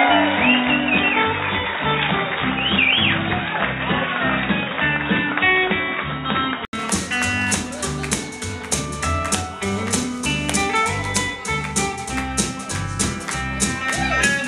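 From 0.0 to 6.73 s the audio is band-limited, with nothing above 3.8 kHz, so it sounds dull and boxy, and it carries its own low background noise well below the signal. At 6.73 s there is an 80 ms silence, after which the full bandwidth returns with no clear change in level. That pattern points to an input switched to a poorer device, likely a headset call profile or another microphone, that was switched back to the main input.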